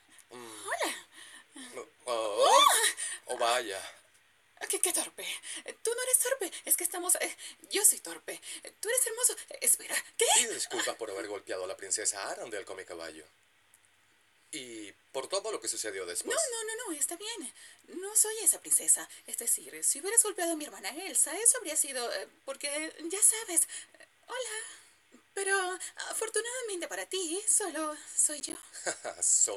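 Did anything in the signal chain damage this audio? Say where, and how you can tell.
Yes. Processor overload crackle appears from 28.4 to 28.63 s, right near the end, at the driver and buffer stage. Over that quarter second the sound breaks into a gritty crackle made of several short dropouts with hard edges, each falling to silence. The processor was failing to fill its audio buffers before their deadlines. The spacing suggests buffers of around 10 ms with roughly five missed, and the crackle ends once the load clears.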